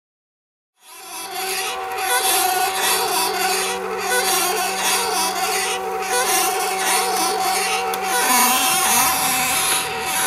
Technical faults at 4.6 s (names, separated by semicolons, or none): none